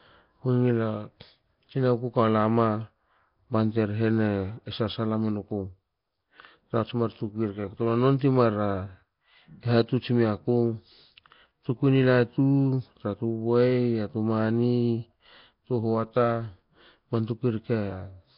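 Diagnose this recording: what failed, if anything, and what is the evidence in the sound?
The failure is at the codec stage, and the likely cause is Nellymoser compression, the old Flash microphone codec. Throughout the speech there is a rough, hissy halo and a smeared, underwater blur, and nothing survives above about 5.3 kHz. The damage is heavy, which fits a bitrate near 22 kbps. The codec spends a fixed two bits per sample, so weak bands get no bits and are refilled with noise. That noise fill sets it apart from a plain low-pass filter.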